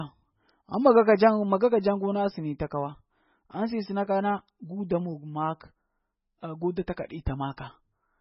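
MP3 compression damage runs through the whole of this speech recording. Nothing is left above 5.6 kHz, and the sound has a watery, swirling texture. That is likely from an MP3 encoder starved of bits, which fits a very low bitrate near 16 kbps: it cuts the treble outright and lets weak frequency lines flicker on and off between frames. Pre-echo occurs at 7.57 s, where a short hiss of about 10 ms comes just ahead of a sharp attack and softens it. The attack falls late in a transform block, so quantisation noise sized for the loud onset also fills the quiet moment before it.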